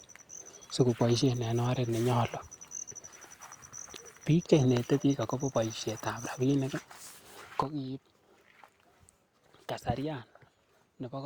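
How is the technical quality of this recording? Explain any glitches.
One glitch stands out in this speech recording. At 7.63 s the level drops abruptly by about 8 dB, speech and background noise together, staying low to the end: a sudden gain jump, likely an unramped digital gain change.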